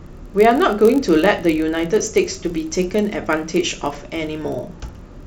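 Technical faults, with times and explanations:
Throughout, block size mismatch (padded): the speech carries a steady low buzz at 46.9 Hz, which fits one stage reading 1024-sample blocks while the stage before it fills each one slightly short. The leftover space in every block is zero-filled, so a tiny silent gap recurs at the block rate and becomes that buzz. The shortfall is small, so the speech runs at 0.999x speed, an imperceptible slowdown.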